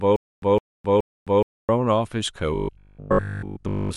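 Stutter with silent gaps runs from the very start of this speech recording to 1.69 s: a 161 ms fragment plays three times, each followed by about 261 ms of digital silence, repeating every 422 ms, likely from a stalled stream replaying its last fragment while the intervening audio is lost. Robotic sound from repeated short buffers follows from 2.55 s to the end at 3.97 s, where a rigid 50 Hz metallic buzz overlays the speech, likely because a 20 ms buffer was looped while most of the real audio was skipped.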